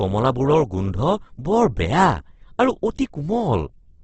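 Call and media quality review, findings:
Speech grainy, rough, noisy throughout; nothing above 8.3 kHz. Likely Opus compression, CELT mode filling starved bands with noise, consistent with roughly 12 kbps.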